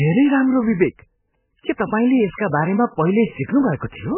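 Throughout, heavy watery, swirling damage points to likely MP3 compression at about 8 kbps. A spectrogram shows nothing above 3.1 kHz and flickering holes.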